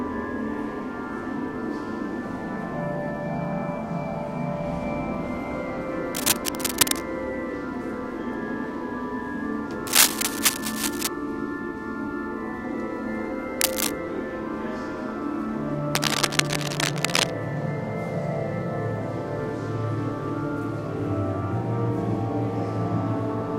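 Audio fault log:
6.09 to 7.02 s, 9.87 to 11.08 s, 13.59 to 13.92 s and 15.92 to 17.30 s: cable scratch noise. Dense, uneven bursts of scratching sit about 5 dB above the sound. The likely cause is a worn cable or connector being moved. Its shifting contact resistance adds the noise.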